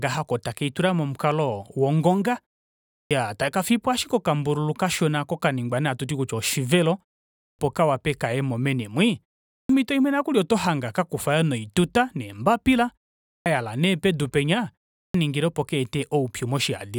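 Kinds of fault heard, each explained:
Clipped start after a pause: speech resumes abruptly out of silence at 3.01, 7.48, 9.59, 13.36 and 15.04 s, each time with roughly the first 100 ms missing, so the opening sounds of the phrase are swallowed. Every one follows a gap of between 0.35 and 0.63 s. The output device drops into a sleep state during these short silences and needs about a tenth of a second to wake and lock again before audio passes.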